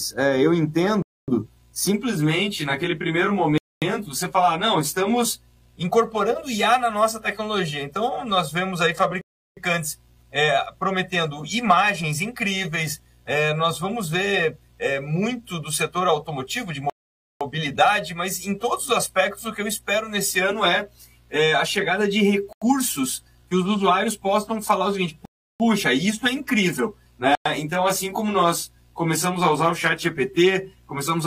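Bluetooth stalls at 1.02, 3.58, 9.21, 16.90, 22.53, 25.25 and 27.35 s: each time the sound drops abruptly to silence, then resumes as if from where it stopped. The gaps run from 88 ms to 510 ms, the longest at 16.90 s. The likely cause is radio interference delaying packets so the headphones' buffer emptied, pausing playback until retransmitted data arrived.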